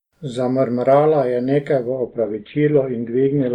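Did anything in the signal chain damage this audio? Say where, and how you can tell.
Yes, at the network stage: an adaptive stream at a lower bitrate. From 1.88 s, just after "je nekaj", to the end, the speech suddenly shows more codec artefacts, with no gap. The connection slowed, so the player swapped renditions. The sound fits a drop from Opus at 64 kbit/s to 12 kbit/s.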